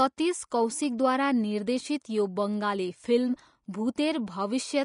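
From start to finish the speech carries plainly audible codec damage: the treble is grainy and hissy, tones sound roughened, attacks are blurred, and nothing is heard above 10.6 kHz. This is likely Vorbis compression at low quality, consistent with a bitrate around 34 kbps. The encoder lowered its cut-off and quantised the upper residue so coarsely over its smooth spectral floor that fine high-frequency detail was replaced by noise of similar energy.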